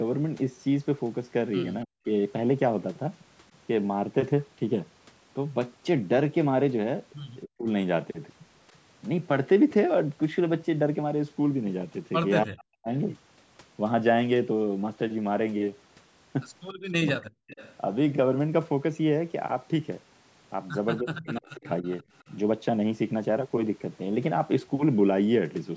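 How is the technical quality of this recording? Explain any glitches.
It's a call recording with two recurring glitches, both from echo cancellation having trouble with two-way talk. The audio also tops out around 8 kHz, which fits the call's processing.

Speech suppressed in double talk hits at 1.85–2.08 s, 7.44–7.67 s, 12.45–12.88 s, 16.73–17.41 s and 21.01–21.85 s. The voice ducks or drops out in pieces, as deep as about 40 dB, with the 7.44 s dip milder. The likely cause is the canceller clamping down on everything while both sides spoke.

Echo leak shows up at 3.54–3.58 s, 17.47–17.75 s and 20.97–22.24 s. You hear a delayed copy of the voice, 278 ms behind, barely there at first and fairly noticeable in the last stretch. The likely cause is a speakerphone whose canceller let some of its own loudspeaker sound back through.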